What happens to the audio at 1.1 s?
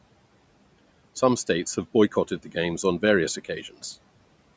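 Nothing goes wrong at 1.1 s: the speech there is intact, with only the room noise well below it and the normal bass roll-off of call microphone processing.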